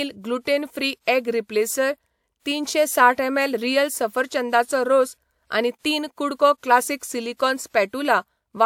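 Pre-echo smears the speech attacks at 1.05 s (24 ms), 5.79 s and 6.58 s (55 ms each): codec noise leaks ahead of each onset as hiss, unlike reverb, which trails after.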